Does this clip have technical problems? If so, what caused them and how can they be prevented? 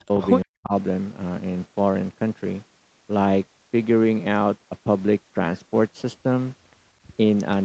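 Yes. Near the start, the speech abruptly drops out twice: from 0.03 to 0.12 s, and again from 0.43 to 0.73 s, each time sinking by roughly 40 dB. This is likely speech suppressed in double talk. With both ends speaking at once, the echo canceller mistook the near talker for loudspeaker echo and attenuated it along with the echo. A headset, or an echo canceller with more robust double-talk detection, prevents this.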